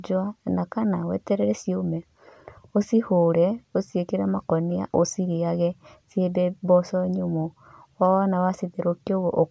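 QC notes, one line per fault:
No fault found.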